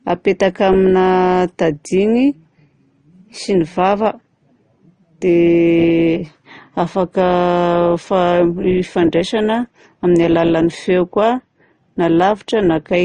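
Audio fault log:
Throughout: transcoding between lossy codecs. The speech carries two layers of compression grit at once, swirly smearing plus a grainier edge, and nothing above 9.8 kHz. It's likely an MP3 near 40 kbit/s re-encoded to Opus near 24 kbit/s, each encoder's damage stacking.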